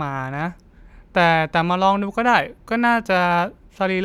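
No technical faults can be heard anywhere in the speech recording, and the signal stays continuous and stable throughout.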